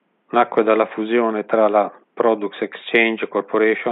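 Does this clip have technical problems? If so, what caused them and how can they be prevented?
No, the speech signal is technically intact, with only a faint room background sitting about 49 dB below the voice as part of the original recording rather than anything the system introduced.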